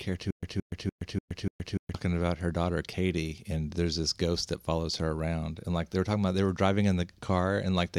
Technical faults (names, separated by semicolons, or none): stutter with silent gaps